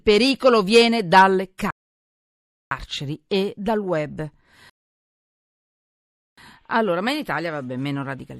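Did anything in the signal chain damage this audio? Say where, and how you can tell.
Yes, at the playback end. There are two rebuffering stalls: the speech drops to dead silence from 1.71 to 2.71 s, adding about 1.0 s, and again from 4.70 to 6.38 s, adding about 1.7 s. Each time it picks up exactly where it left off, with nothing skipped. That tells you the player drained its buffer of downloaded audio and simply waited for more data to arrive, rather than dropping anything.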